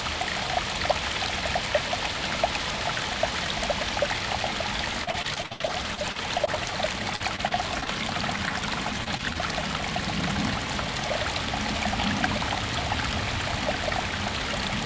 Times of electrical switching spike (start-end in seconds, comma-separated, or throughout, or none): none